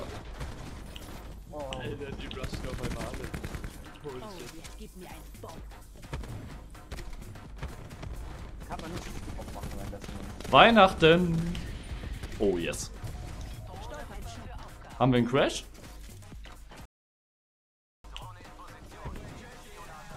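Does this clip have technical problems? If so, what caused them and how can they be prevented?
Yes. At 4.64 s the sound skips forward with no silence, dropping roughly a third of a second. This is audio missing between chunks, likely lost while the recorder closed one chunk and opened the next. Unlike a stall, there is no pause, only a jump. Overlapping or continuously buffered chunk handoffs prevent it.

From 16.85 to 18.04 s there is a rebuffering stall: the player ran out of downloaded audio, went silent for about 1.19 s, then resumed exactly where it stopped. Nothing is lost, which separates it from a dropout. A larger playback buffer or more reliable network throughput prevents it.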